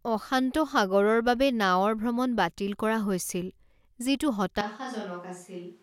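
From 4.61 s to the end, the speech abruptly turns hollow and roomy, roughly 10 dB quieter and noisier: likely a switch to a distant microphone.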